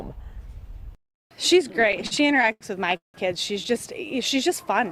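From 1.67 s to 3.17 s the audio drags and stutters, catching and holding again and again, fifteen times in about a second and a half, with the longest hold lasting 173 ms and the longer ones fading out. These are repeated stalls (stutter): packets arrived late, the jitter buffer kept running dry, and the receiver stretched the last sound to bridge each wait. About 426 ms, roughly 28% of that stretch, is filler, yet nothing is lost.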